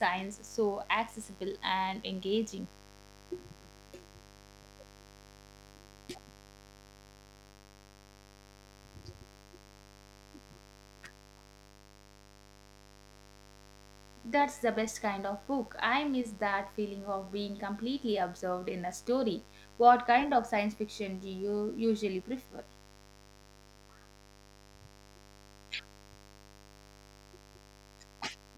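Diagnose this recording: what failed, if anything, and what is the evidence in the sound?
The fault is in the analogue wiring: a mains buzz runs under the speech from start to finish, sitting roughly 25 dB below it. Its raspy edge comes from harmonics of 50 Hz stacked up into the kilohertz range. That points to sharp switching spikes, twice per cycle, leaking in through a dimmer, a rectifier or a missing shield. A plain ground-loop hum would sound smooth and low instead, nearly a pure 50 Hz tone.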